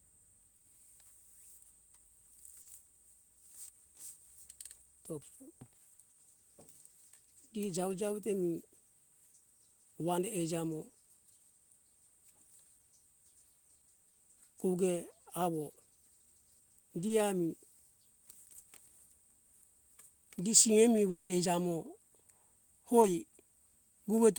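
Speech, marked by short concealed packet loss at 0.57, 2.62, 5.96, 14.10 (just before "koge awo"), 17.08 and 23.02 s. In each, 20 to 40 ms of audio arrived too late and was patched by extending the preceding sound, giving a quick smear or wobble rather than any gap. The long network dropout at 21.10 to 21.32 s, right after "gi seimi", is different. A full 0.2 s is filled with a continued, fading buzz or hiss before the speech returns with that part missing, likely from a stretch of packets lost in transit. No silence opens up.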